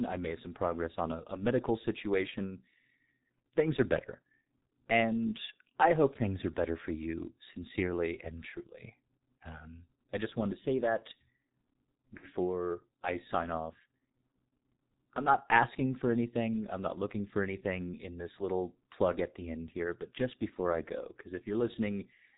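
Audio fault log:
throughout G.723.1 codec: a heavily coded speech-band channel, muffled and hoarse, with smeared consonants. The spectrogram shows nothing above 4 kHz, and the sound fits a coder near 6 kbit/s whose coarse 30 ms frames blur fast transitions and roughen the harmonics.
12.17–12.28 s VoIP packet loss concealed by the speech codec: about 60 ms of audio went missing, and the decoder filled it by repeating its last pitch and filter at falling gain. This produces a stretched, fading sound, seen on the waveform as a decaying stretch.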